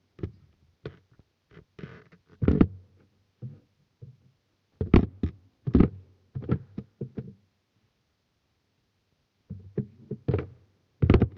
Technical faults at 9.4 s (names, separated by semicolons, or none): none